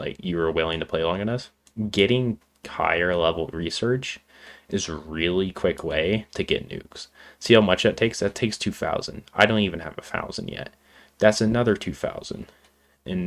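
No technical faults can be heard anywhere in this audio. Nothing in the recording or playback chain audibly goes wrong at any point.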